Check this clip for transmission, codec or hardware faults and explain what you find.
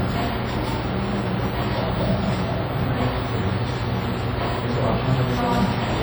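One codec fault runs through the whole clip of sounds.

WMA compression, throughout: the sounds carry a ringing, washy smear with hiss that swells and fades with each event. This is likely from a transform codec with long blocks spreading quantisation noise over tens of milliseconds and zeroing weak components. The heavy damage fits about 32 kbps. Unlike a low-passed MP3, content still reaches about 20.1 kHz.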